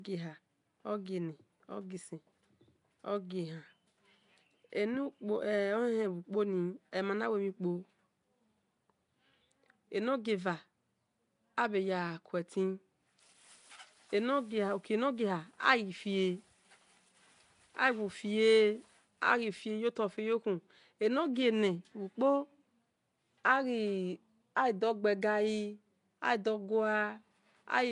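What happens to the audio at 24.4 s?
At 24.4 s the speech sounds rough and smeared, wrapped in a hissy, underwater halo with nothing above 10.6 kHz, as it does throughout the clip. This is likely Nellymoser compression, Flash's block codec, which starves weak bands and fills them with noise; the damage points to roughly 44 kbps.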